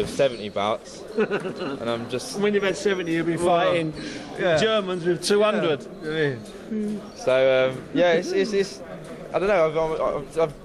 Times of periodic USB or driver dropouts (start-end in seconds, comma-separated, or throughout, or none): none